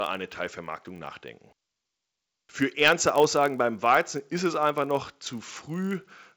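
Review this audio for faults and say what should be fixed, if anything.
A block size mismatch (padded) runs throughout the speech. Each 1024-sample read gets a sliver of zeros, causing a 46.9 Hz buzz while pitch holds and playback slows by only 0.999×. Unlike mains hum, the buzz sits at the block rate rather than 50 or 60 Hz. Prevent it by making every stage read and write identical block sizes.

Hard clipping occurs from 2.82 to 3.44 s, where peaks overdriven by about 4 dB are cut flat into crackle. Unlike a limiter's smooth gain reduction, the tops are sheared abruptly, adding harsh high harmonics. Prevent it by setting gain so peaks stay below full scale.

The G.722 coding, clear up to about 7 kHz, shows at most faint coding damage.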